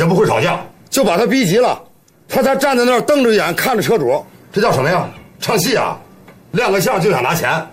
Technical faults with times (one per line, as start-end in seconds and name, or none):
none